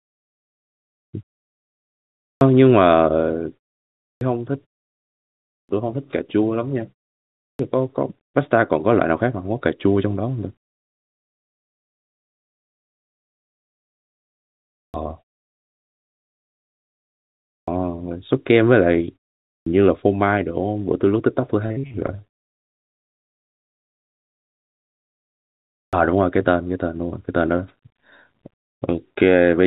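Clipped starts after a pause occur at 2.2, 3.99, 5.47, 7.38, 14.72, 17.49 and 19.46 s. Each time speech resumes, roughly 0.19 to 0.22 s of its onset is missing, so the sound begins abruptly, without its first sounds. The pauses before these starts range from 0.36 s to 4.2 s, and short pauses cause the loss just as long ones do. This points to an output device that sleeps during silence and needs about a fifth of a second to wake or re-lock.

From 21.66 to 23.95 s there is repeated packet loss with a robotic sound. Many short holes, none longer than about 49 ms, remove around 0.42 s of audio in total. Each hole is bridged by extending the preceding sound, and about a fifth of this stretch is concealed. The result is choppy, robotic speech with fragments missing. It sits on top of the narrowband G.711 mu-law call path, which has nothing above 4 kHz.

At 25.73 s another clipped start after a 3.5 s pause removes about 0.2 s of the onset in the same abrupt way.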